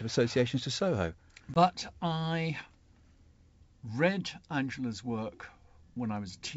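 Speech, carried over a G.722 wideband link whose slight upper-band hiss fits the full 64 kbit/s mode, shows one instance of packet loss on an ADPCM call between 1.54 and 1.59 s. About 20 ms of audio drops to a hard-edged silence, consistent with a single lost packet. Because ADPCM decoding depends on predictor and step-size state built from every previous sample, the gap leaves the receiver's state out of step with the sender's. When the speech resumes, it comes back slightly distorted, an error that clears over the following few tens of milliseconds as the decoder re-converges.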